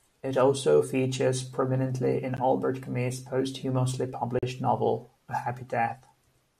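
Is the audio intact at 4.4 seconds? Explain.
No: a gap between stream segments at a 2-second segment boundary leaves 4.39 to 4.43 s unfilled, cutting a hard-edged 40 ms silence into the speech.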